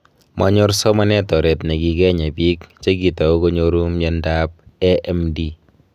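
No dropouts, clicks, distortion or other technical faults can be heard anywhere in the speech.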